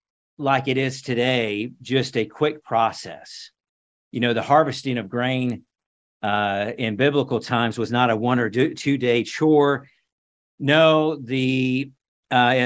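From 4.75 to 6.25 s, the resampler restarted on every 250 ms block and botched each block edge, leaving regular ticks at 4 per second.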